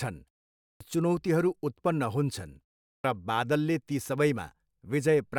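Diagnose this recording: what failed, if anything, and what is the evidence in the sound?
Playback stage, clipped start after a pause: the output device sleeps through silence, so onsets at 0.68 s and 2.93 s (just before "बादलले ती") lose roughly 125 ms and 112 ms.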